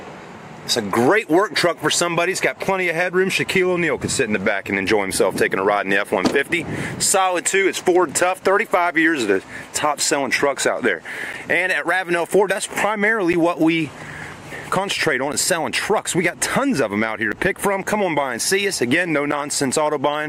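Starting around 11.33 s and running to about 19.32 s, the audio picks up periodic USB or driver dropouts: every 2.0 s a short chunk, roughly ten milliseconds, gets blanked to silence, giving about five evenly spaced ticks, as if a background task keeps stalling the bus or audio driver.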